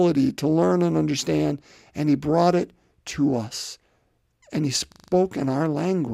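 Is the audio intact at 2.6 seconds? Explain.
Yes, the speech plays through 2.6 s with no dropout, click, distortion or other fault at that moment.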